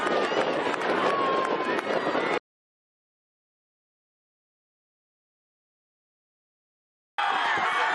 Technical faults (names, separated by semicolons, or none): compressed frames skipped; audio dropout to silence